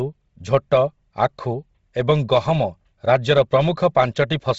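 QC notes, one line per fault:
Throughout, Bluetooth LC3 compression: the speech has a breathy, grainy edge and nothing above 7.7 kHz, likely from LC3 coding, whose heavy damage points to a low bitrate near 24 kbps, with high bands zeroed and refilled with noise.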